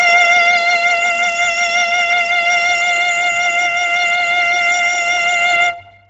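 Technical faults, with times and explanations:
Throughout: Bluetooth LC3 compression, likely; the music has nothing above 7.7 kHz and a heavy breathy, grainy edge where noise fills the zeroed upper spectrum, which fits a low bitrate near 16 kbps in 10 ms frames, unlike a clean low-pass.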